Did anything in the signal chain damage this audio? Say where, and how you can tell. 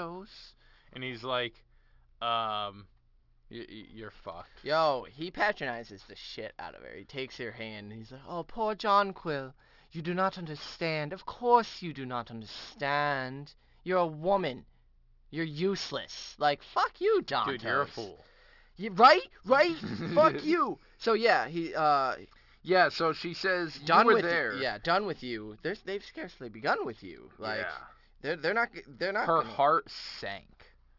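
Yes. The damage is at a sample-rate conversion step, and it runs through the whole clip. The sibilants come out gritty and metallic, and the spectrum stays packed right up to a hard edge at 6 kHz. That points to a drop from 44.1 kHz to about 12 kHz with no anti-alias filter. Everything above 6 kHz folded back down into wrong, unrelated frequencies. That's aliasing, and it sits only around 20 dB under the speech.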